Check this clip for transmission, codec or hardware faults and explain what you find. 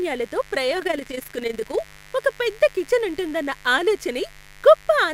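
Two faults are present: a mains buzz under the whole recording and a short stretch of overlap-add ripple.

Mains buzz, throughout: switching spikes from a dimmer, rectifier or unshielded line enter twice per 50 Hz cycle, spraying harmonics into the kilohertz range. It sits roughly 25 dB below the speech as a constant, raspy buzz.

Overlap-add ripple, 0.8 to 1.83 s: the audio was split into windowed frames and rejoined with an overlap that fails to sum to constant gain, so level swings by about 11 dB around 30 times a second, heard as a rough flutter.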